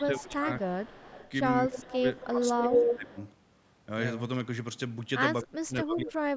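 A speech recording with two recurring call faults. Speech suppressed in double talk appears from 0.0 to 0.5 s, 1.65 to 2.07 s, 2.24 to 3.17 s and 5.42 to 6.36 s. The voice sinks by roughly 15 dB in the first three stretches and about 30 dB in the last. The likely cause is an echo canceller turning everything down while both ends talk. This differs from a network dropout because the level ducks and recovers rather than stopping abruptly. An echo leak follows the voice at a steady 241 ms delay at 0.61 to 1.31 s, 1.72 to 2.27 s, 2.68 to 2.81 s and 3.11 to 3.31 s. It sits about 20, 10 and 30 dB below the speech in three of those stretches, and at 2.68 s it rises to about 5 dB above it. This is likely loudspeaker sound that an echo canceller failed to remove. The fixed delay and the way it repeats the talker's own speech set it apart from room reverberation, which decays smoothly rather than returning as a distinct copy.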